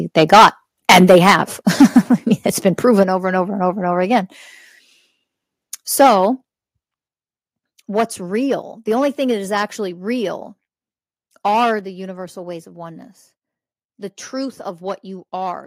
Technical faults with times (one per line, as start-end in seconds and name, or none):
0.17-0.47 microphone overload
0.34 microphone volume stepped down
0.89-1.41 microphone overload
1.80-1.99 microphone overload
2.67-2.69 microphone overload
3.03 microphone volume stepped down
6.00-6.07 microphone overload
6.07 microphone volume stepped down
7.08 microphone volume stepped down
11.79 microphone volume stepped down